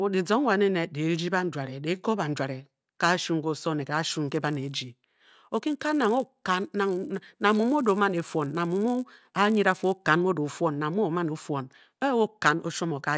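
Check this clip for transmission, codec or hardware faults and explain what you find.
One fault is present. From 4.29 to 10.12 s, after "ne gashu", the resampler restarted on every block: each 10 ms block edge errs, giving a 100 Hz buzz that, unlike hum, stops in pauses.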